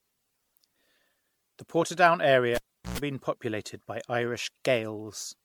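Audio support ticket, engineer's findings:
Throughout: swirly, hollow, smeared speech, consonant attacks blurred, nothing above 19.9 kHz. Likely generation loss: repeated MP3 decode and re-encode, roughly ten passes, fits 96 kbit/s. Each pass requantises on a shifted frame grid, compounding noise and spectral holes.

2.55–2.98 s, before "been populated by": pop, 0.38 s near-silent dropout, 0.11 s burst of 60 Hz mains buzz, second pop on return. Cable pulled and plugged in on a live line. Buzz while only the plug tip touched.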